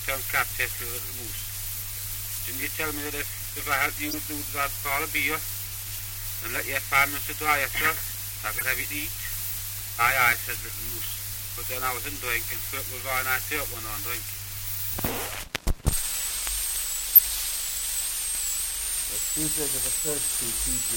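Corrupt frames were decoded at 4.05 to 4.16 s, 8.58 to 8.63 s, 17.15 to 17.22 s and 20.29 to 20.36 s, each a short burst lasting a few compressed frames. Flipped bits in those frames made the decoder apply wrong gains and misread spectral codes, so energy lands at the wrong frequencies until clean frames resume. Most bursts peak around -15 dBFS, but the one at 17.15 s is much stronger, roughly 15 dB higher than the others.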